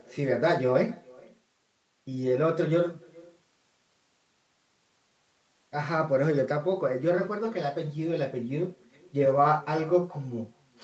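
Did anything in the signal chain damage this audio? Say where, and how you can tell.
Yes. Throughout the clip there is echo with no canceller. At the far end, a loudspeaker's output reaches the microphone, nothing removes it, and the network round trip returns it roughly 0.4 s late and about 26 dB down. On a spectrogram, each phrase's pattern repeats faintly to the right, inside the same band that stops near 8 kHz.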